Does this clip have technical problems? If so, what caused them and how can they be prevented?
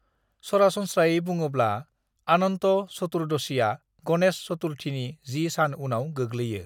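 No, no technical faults here.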